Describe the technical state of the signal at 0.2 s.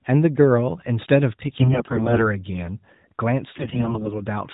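At 0.2 s the audio is intact, with no fault present at that moment.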